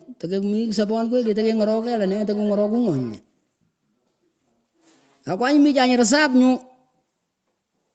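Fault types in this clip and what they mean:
Feedback echo between two devices: from 0.45 to 3.23 s the speech returns roughly every half second, thin and ringing, at most about 23 dB below the direct sound. A second device in the room plays the call aloud, and the first device's microphone feeds it back past the echo canceller.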